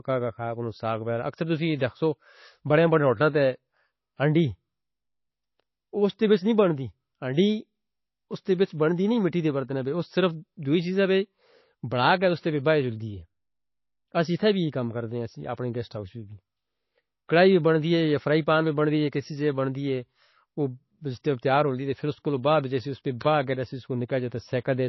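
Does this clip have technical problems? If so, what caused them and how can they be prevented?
Yes. Across the whole clip the speech is dull and smeared, with nothing above about 5.8 kHz and a swirly, watery texture. That pattern points to low-bitrate audio saved at a high bitrate: the file was likely squeezed through a very low-rate MP3 encode first, then re-saved as a larger MP3, which can't bring back anything the first pass discarded. To prevent it, always encode from the original uncompressed source at the target bitrate.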